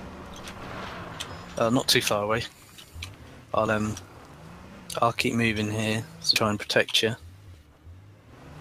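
Four sudden skips land at 0.92, 3.67, 4.74 and 6.36 s, each a point where the audio jumps straight ahead with no gap. The first two lose only a sliver, the later ones noticeably more. It sounds like a dropped buffer (overrun), likely, with unread samples overwritten before capture.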